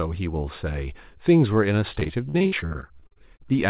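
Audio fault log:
1.94–3.54 s, repeated packet loss (robotic sound): nineteen short gaps follow one another, the longest 56 ms. Each is patched by extending the previous sound, so about a third of this speech is filler, which makes it choppy within the narrowband, 4 kHz-limited call audio.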